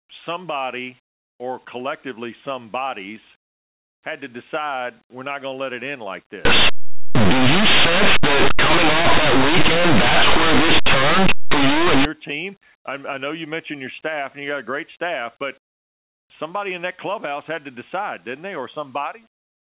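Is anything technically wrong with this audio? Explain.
Yes. From 6.45 s to 12.05 s, just after "let it end like" and until "team I I know", there is linear audio read as companded. Plain 8-bit linear samples were decoded as mu-law codes. Small values near zero on one side become huge outputs. The result is very loud, harsh distortion.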